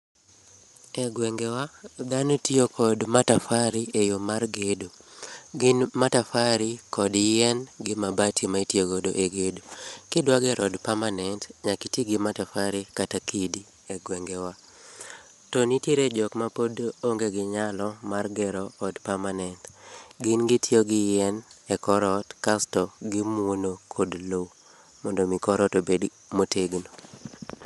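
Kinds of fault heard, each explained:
Bluetooth LC3 compression: speech is plainly grainy and breathy throughout, with nothing above about 11.5 kHz, likely from the LE Audio transform codec at a rate near 48 kbps with 10 ms frames. A spectrogram shows a hard ceiling and speckled, noise-filled upper bands.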